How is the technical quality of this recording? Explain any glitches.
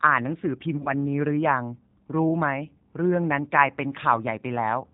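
Quality is limited by low-bitrate coding, with one brief dropout. Throughout, the G.729 codec is clearly audible. Speech is band-limited below 4 kHz and sounds rough and synthetic, which fits an 8 kbit/s link. From 0.78 to 0.91 s there is VoIP packet loss concealed by the speech codec. About 50 ms of audio went missing in scattered gaps. The decoder stretched the last sound into a fading buzzy tone or coloured noise, and the speech stays weak or distorted briefly afterwards.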